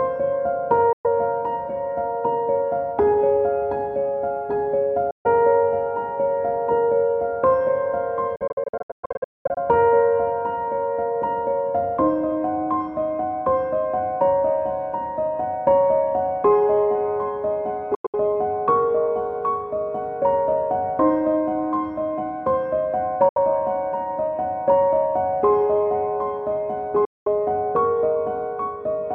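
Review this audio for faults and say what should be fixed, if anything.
Six silent gaps occur at 0.93–1.06 s, 5.11–5.27 s, 8.36–9.58 s, 17.95–18.15 s, 23.29–23.38 s and 27.05–27.28 s. The 8.36 s stretch is a cluster of holes totalling about 0.77 s, the longest 0.21 s. After each gap the sound resumes as though it had kept playing, which fits a likely Bluetooth dropout, with late packets discarded in blocks of about 23 ms. To prevent it, shorten the link distance, reduce 2.4 GHz interference, or use a more robust codec setting.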